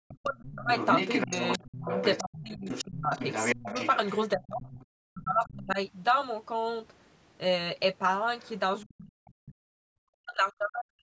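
From 0.02 to 0.71 s the talker's level collapses by up to about 40 dB, and it happens again from 1.26 to 3.74 s, from 4.33 to 5.79 s, and from 8.84 s to the end. These dips are likely speech suppressed in double talk: with both sides talking, the echo canceller turned everything down.

Another voice runs underneath from 0.45 to 4.86 s, only about 5 dB below the talker. It returns as faint scraps about 25 dB down at 5.44 to 5.53 s and 8.4 to 9.33 s. This is likely the other side's voice leaking through from the loudspeaker because the echo canceller didn't remove it.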